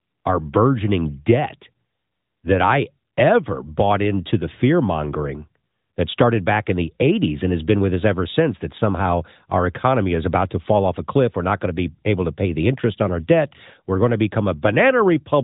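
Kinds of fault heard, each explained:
No faults heard.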